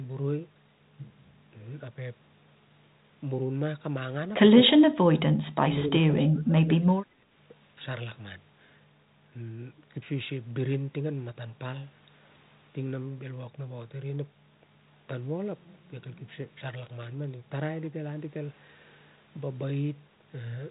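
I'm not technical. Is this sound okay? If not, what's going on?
No. From 4.58 to 5.39 seconds, and again from 5.57 to 7.28 seconds, the speaker's voice suddenly drops away, going much quieter, thinner or briefly missing in patches, then returning. This is most likely speech suppressed in double talk: both people on the call spoke at the same time, and the phone's echo-cancelling feature couldn't tell this speaker's voice apart from the other side's sound, so it turned this voice down too.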